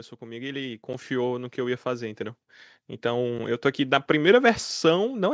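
The clip is speech. An automatic gain rise runs from 0.18 s to 4.07 s. The gain control judged the input too quiet and lifted it by about 12 dB. Voice and background swell together, slowly, over nearly four seconds. Two blocks of digital silence cut in, at 0.93 s and 3.39 s. Each is an 8 ms gap, heard as a tick, which fits a 128-sample buffer left unfilled. The sound drops straight out and back with no fade. The audio has also passed through call microphone processing, with nothing above 8 kHz.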